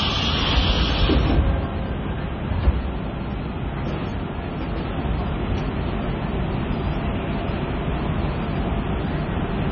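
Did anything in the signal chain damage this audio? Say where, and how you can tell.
Yes. Throughout, the treble stops dead at about 6.5 kHz, and the remaining sound is watery and swirly with smeared attacks. This points to heavy MP3 compression at the codec stage, likely from a very low bitrate of around 22 kbps. Starved of bits, the encoder drops everything above that fixed cut-off and zeroes weaker frequency lines frame by frame. On a spectrogram this shows as a flat ceiling with flickering holes below it.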